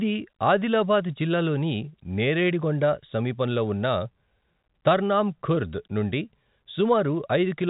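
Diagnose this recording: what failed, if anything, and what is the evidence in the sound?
No fault found in this recording.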